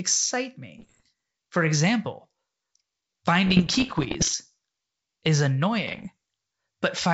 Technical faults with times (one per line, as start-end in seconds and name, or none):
0.78-1.07 bit errors on an ADPCM link
3.46-4.35 bit errors on an ADPCM link
5.87-6.09 bit errors on an ADPCM link